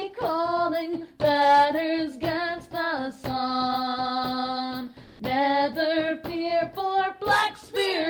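From 5.03 to 5.19 s, about 160 ms, there's comfort noise in place of the background. The real ambience, sitting about 33 dB below the loud parts, drops out and a smooth, featureless hiss fills the gap, roughly 5 dB off the true level, before the proper background returns. The likely cause is discontinuous transmission in an Opus-style codec: the sender went quiet during a pause, and the receiver patched it with synthetic noise.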